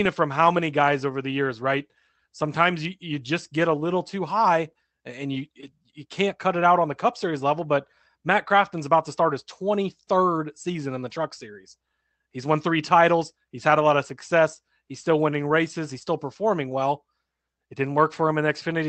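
Speech recording with no audible technical faults.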